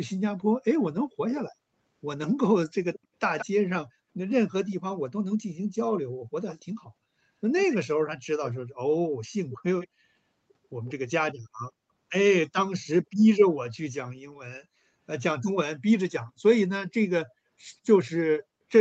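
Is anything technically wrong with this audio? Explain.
Yes. Two faults can be heard.

There is an echo leak at 2.94–3.46 s, 4.71–8.51 s, 9.50–9.88 s and 10.87–10.93 s. A delayed copy of the speech trails the original by 168 ms at first and 139 ms afterwards. It fades from about 10 dB to about 25 dB below the speech. The likely cause is a far-end loudspeaker whose echo canceller let some of the microphone pickup return.

There is also background gated by the echo canceller at 3.96–4.11 s, 13.04–13.18 s and 16.32–16.36 s. The canceller briefly turned the microphone down hard. The room sound dips by about 38 dB twice, then by about 17 dB, and returns within moments.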